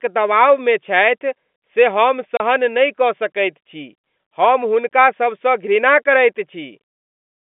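At 2.37 s, between "मे छथि से हम" and "नहि कऽ सकैत छी", and again at 4.89 s after "कऽ सकैत छी हम", packet loss filled with silence cuts 30 ms and 20 ms holes into the speech, consistent with 10 ms packets. Each gap has hard edges, heard over G.711-style telephone band audio.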